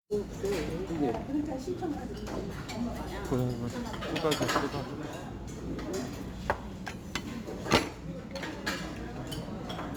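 From the very start and running the whole way through, there's crude rate conversion on these sounds. Someone resampled by just grabbing the nearest sample, with no filtering, and the pattern of skips fits a 48 kHz to 44.1 kHz change. That timing error builds tones that have nothing to do with the actual sound. You hear it as a gritty, inharmonic fizz riding on the loud and bright moments, sitting roughly 25 dB under the signal.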